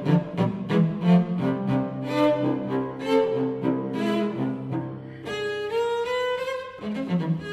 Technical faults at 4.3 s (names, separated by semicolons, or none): none